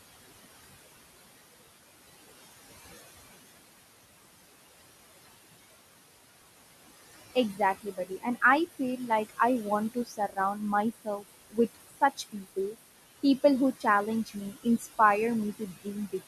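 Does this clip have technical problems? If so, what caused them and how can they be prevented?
Yes. Noise suppressor artifacts run through the whole clip: the suppressor pulls the room noise, which sits about 13 dB below the speech, down by about 19 dB frame by frame, so the background dips between phrases and swells under them. A gentler suppression setting or a quieter recording space would prevent this.

Speech cut by the noise suppressor occurs at 7.14–9.39, 9.94–10.56, 10.93–12.75, 14.26–14.87 and 15.53–16.21 s. The suppressor mistakes brief, soft parts of the speech for noise and lowers them by about 16 to 20 dB, so they sound swallowed, for roughly half a second or less within each stretch. Placing the microphone closer, to raise the speech above the noise, would prevent this.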